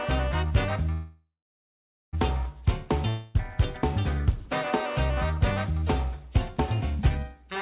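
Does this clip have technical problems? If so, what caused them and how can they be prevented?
Yes, there are two. At 0.92 s the sound freezes into a fading buzz and then silence until 2.15 s. That's a call audio freeze, likely caused by packets stalling until the jitter buffer ran dry. About 1.2 s of gap was inserted, but nothing was lost. A larger or more adaptive jitter buffer, or a steadier connection, would prevent it.

From 3.09 to 3.36 s there's a long network dropout. The last sound is stretched into a decaying hiss, and when the audio resumes, about a quarter second of it is simply gone, likely because those packets never arrived. Redundancy or forward error correction on a less lossy link would prevent it.

The band-limited sound, with nothing above 4 kHz, fits a narrowband 64 kbps G.711 call path.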